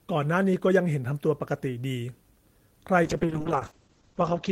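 Speech that turns rough and muffled from 3.07 s to the end, a call bitrate drop from 32 to 8 kbps; a spectrogram shows content cut above 8 kHz.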